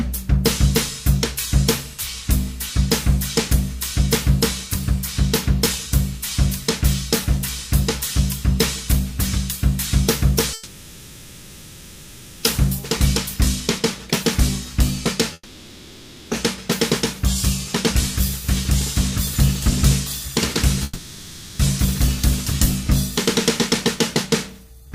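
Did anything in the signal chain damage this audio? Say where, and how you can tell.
Yes. Three times the sound smears into a buzzy, hissy continuation of whatever came just before, then resumes further along with that stretch simply gone: 10.53 to 12.45 s (about 1.9 s), 15.33 to 16.33 s (about 1 s, ending in a brief 30 ms gap of silence), and 20.83 to 21.61 s (about 0.76 s). This is likely a long network dropout: packets stopped arriving, the receiver's concealment padded the hole by extending the last sound, and the missing audio was never recovered.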